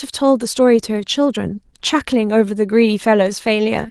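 No technical faults are audible in this speech.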